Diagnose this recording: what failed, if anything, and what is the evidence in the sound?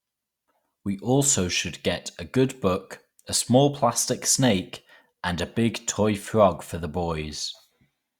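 Nothing here has failed: the speech comes through steadily at every stage from capture to playback, with nothing in the sound that points to a fault anywhere along the chain.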